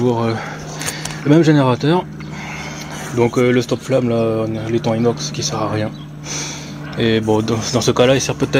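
Nothing stood out as a technical fault on listening to the recording.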